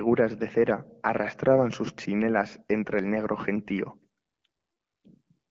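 Nothing in the speech stood out as a fault on listening.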